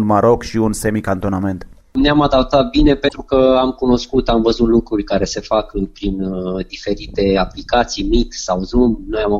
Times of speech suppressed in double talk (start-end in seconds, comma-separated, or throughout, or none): none